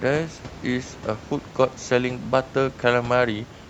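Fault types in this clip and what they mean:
No faults can be heard anywhere in this speech clip.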